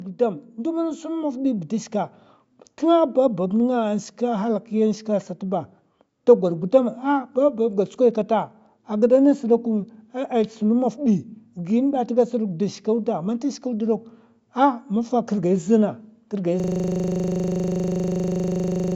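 From 0.29 s to 7.88 s, automatic gain rising lifts the level by about 5 dB. The gain control judged the input too quiet and kept raising its gain, so the voice and the background noise swell together rather than the speech simply getting louder. The growth levels off just before "kata a gida ngas". On a waveform the envelope widens steadily across those seven seconds. On a spectrogram the whole band, including the noise floor between phrases, brightens at the same rate.

At 16.6 s, right after "mafa kirgai zanakirgai", a system hang loop starts and runs to the end of the clip. The computer or driver froze while the sound hardware kept replaying the same 40 ms stretch of its ring buffer, around sixty times in a row. A loop that short repeating at 25 Hz sounds like a rigid, buzzy stutter with no further speech. On a waveform one block repeats identically, and on a spectrogram vertical stripes appear every 40 ms. 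The content stops below the 8 kHz limit of the call microphone processing.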